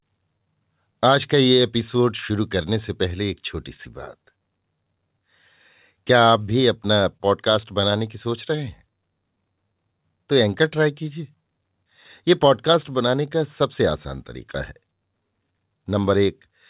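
Throughout the speech there is clock drift between sender and receiver. The sender's clock runs roughly one and a half percent slow against the receiver's, so the jitter buffer keeps draining. This gives a faint, uneven unsteadiness in timing from start to finish.

From 0.43 s to 16.05 s the receiver makes repeated timing corrections. It inserts short stretched pieces to keep pace, which slows playback to about 99% speed and adds roughly a fifth of a second overall. These edits are small, irregularly spaced slowdowns or hiccups in the rhythm.

From 7.17 s to 7.22 s there is a short stall from a late packet. The buffer ran empty and the receiver held the last sound for 25 ms until the packet arrived, then resumed with nothing lost. It is audible as a briefly prolonged sound with a slight buzz or dip, through a call path limited to 4 kHz, consistent with G.711 A-law.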